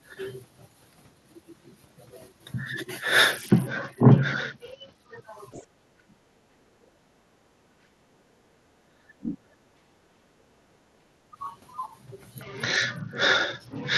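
A speech recording with two stretches of Bluetooth SBC bit pool drop, from 3.31 to 5.22 s and again from 12.42 s to the end. The treble goes dull and a gritty grain creeps in, which fits the phone cutting the bit pool from 28 to 8, around 72 kbps, so the upper sub-bands get starved and everything else is coarsely quantised. Right after, from 5.51 to 5.66 s, there's a faint scrap of a second voice, about 20 dB under the talker. That's likely the other side's voice leaking through, loudspeaker pickup the echo canceller didn't fully remove. Then from 5.8 to 10.83 s the talker keeps dipping and dropping out in pieces, roughly three seconds in total, with the deepest cut near 35 dB. A short, shallower dip of about 10 dB follows at 11.31 to 11.37 s. Both look like speech suppressed in double talk, the canceller likely ducking everything while both ends talk at once.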